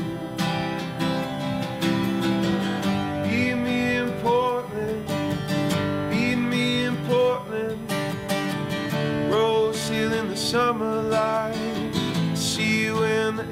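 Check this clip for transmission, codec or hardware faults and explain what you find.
There is one hardware fault, a USB whine, present from start to finish. It is a steady tone fixed at 1 kHz, with its strongest component at the 2 kHz harmonic, sitting roughly 30 dB below the programme. Current drawn by the USB bus in its 1 ms frames is getting into the audio path through shared power or ground, and that regular pulsing produces the 1 kHz tone and its multiples. It is heard as a thin, unchanging whine under the sound.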